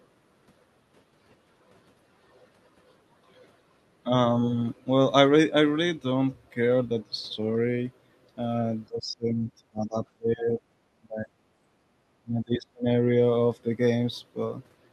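From 8.88 to 10.6 s, 10.93 to 11.32 s and 12.2 to 12.86 s, the talker's level drops by roughly 25 dB in the first stretch and about 35 dB in the other two, with parts of the sound breaking away. This is speech suppressed in double talk, likely caused by the echo canceller treating overlapping far-end audio as echo and turning the near side down. It differs from a network dropout because the cuts track the overlap and leave no gaps in timing.

Between 11.79 and 11.92 s, the room tone alone sinks by about 8 dB for roughly 150 ms, then comes back. This is background gated by the echo canceller, which pulled the microphone down while the loudspeaker played. Because only the ambience dips, briefly and shallowly, it sounds different from the deep, drawn-out speech losses. The call path itself has a top end near 12 kHz, in line with Opus at a moderate bitrate.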